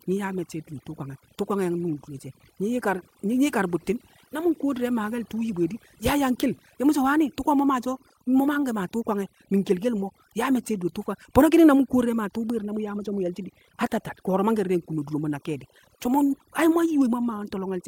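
Overdone noise removal runs through the whole speech clip: bands near the estimated noise floor are pulled down hard, leaving a lowered background that breaks up into twinkling specks. Clock drift between sender and receiver is present throughout, with the sender running roughly four percent fast, so the receiver's jitter buffer keeps overfilling and must be trimmed. From 0.19 s to 17.67 s, repeated timing corrections discard short pieces to hold the 104 percent stream in step, heard as small, unevenly spaced hiccups and a slightly unsteady tempo.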